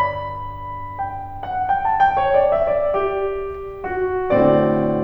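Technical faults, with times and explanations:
No technical faults detected.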